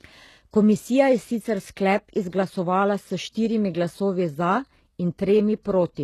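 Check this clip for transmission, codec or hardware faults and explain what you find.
There's one codec problem here, running the whole way through this speech. It's likely HE-AAC compression at a very low bitrate, roughly 16 kbps: nothing above 12.3 kHz, with replicated treble making s sounds gritty and metallic.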